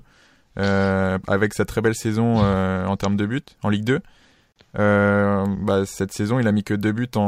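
A gap at a join of encoded pieces opens from 4.52 to 4.56 s: about 37 ms of silence cut into continuous speech, with smeared edges. Separately encoded segments were joined untrimmed, so encoder start delay and final-frame padding remain, and the speech resumes where it stopped. Sample clock jitter runs from 5.46 s to the end. The converter's unsteady clock, wavering by around a microsecond, times samples early or late, adding a roughness roughly 45 dB below the speech that grows with loud, high-frequency sounds and vanishes in pauses.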